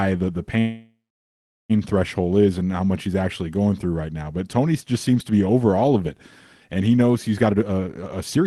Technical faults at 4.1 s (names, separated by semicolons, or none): none